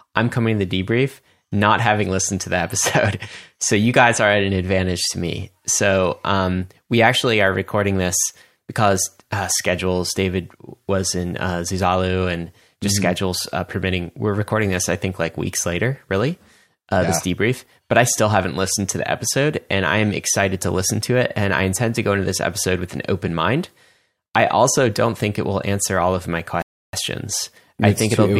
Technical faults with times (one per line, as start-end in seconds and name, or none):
26.62-26.93 playback stall